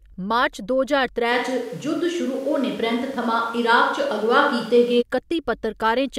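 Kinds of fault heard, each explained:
Switch to a distant microphone: From 1.33 s to 5.00 s the speech turns abruptly roomy and hollow, with thinner bass, then snaps back to the close, full sound. The overall level barely changes across the transitions, but background room noise rises to roughly 30 dB below the speech. The sudden onset and return point to the close microphone's feed dropping out, with a likely fallback to a microphone further from the talker.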